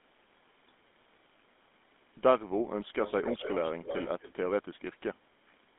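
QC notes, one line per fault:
throughout: GSM full-rate codec. The speech has a buzzy, gravelly roughness and sits in a narrow 200 Hz to 3.6 kHz line band, with nothing above 3.8 kHz. The codec models the vocal tract with coarse pulse excitation, which fits 13 kbps GSM full-rate coding.
3.05–4.34 s: echo leak. A delayed copy of the speech trails the original by 245 ms, around 10 dB quieter. This is likely a loudspeaker echo canceller on one side failing to remove its own playback, which was then sent back down the line.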